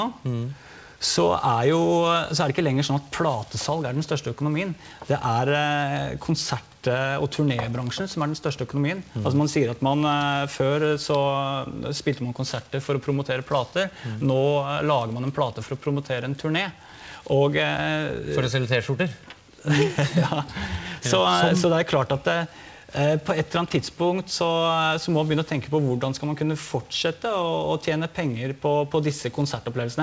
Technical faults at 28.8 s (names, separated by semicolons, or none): none